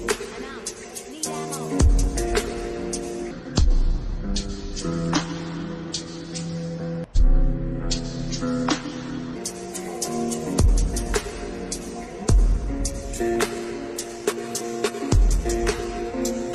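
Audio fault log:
3.31 to 9.36 s, section at the wrong speed: this whole stretch drags at about 0.72 times its proper speed, so everything sounds slower and sits roughly five semitones lower, heavy and sluggish. Pitch and tempo sink together and snap back together at the edges, which is the giveaway that it's playback rate, not a pitch effect. Most likely something fitted this piece to the wrong clock during editing or playback.
13.05 to 16.54 s, adaptive stream at a lower bitrate: with no gap at all, the quality suddenly drops, and codec artefacts rise through to the end. That pattern points to the player dropping from a mid-bitrate AAC version to a very low-bitrate HE-AAC one, around 16 kbit/s, because the connection slowed.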